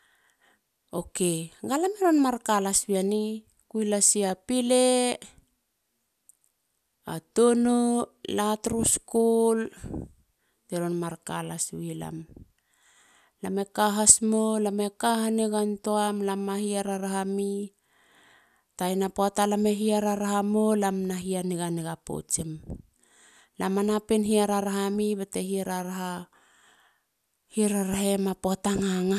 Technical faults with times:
none

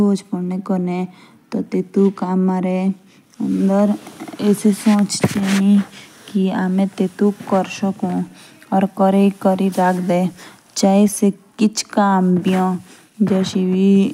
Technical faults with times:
none

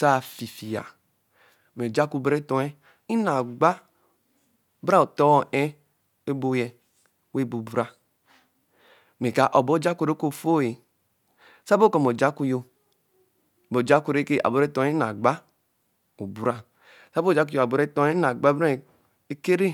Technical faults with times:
none

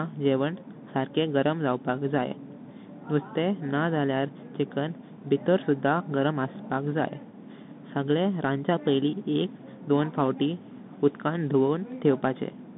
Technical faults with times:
0.00-12.77 Bluetooth CVSD headset codec

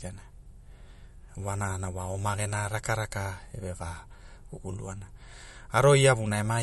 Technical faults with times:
0.00-6.63 MP3 compression

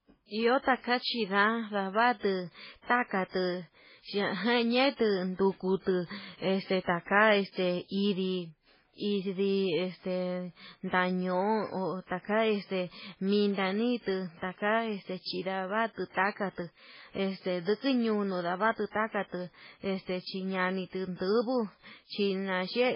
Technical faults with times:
0.00-22.96 MP3 compression

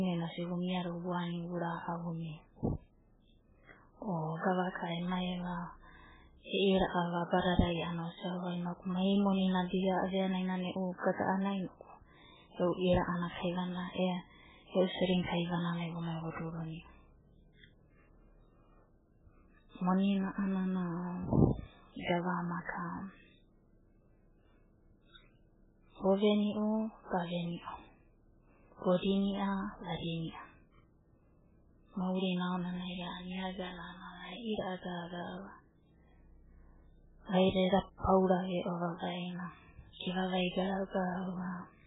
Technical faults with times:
0.00-41.87 MP3 compression

